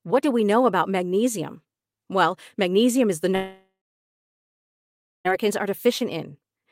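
A speech recording with a long network dropout from 3.35 s to 5.27 s. At 3.35 s the last sound is stretched into a fading buzz, and for about the final 1.51 s of the gap only silence remains. Speech then resumes abruptly, with about 1.9 s of audio lost. A spectrogram shows smeared, flattened harmonics dissolving into an empty band, and the waveform collapses to a flat line, likely from the receiver concealing a run of missing packets.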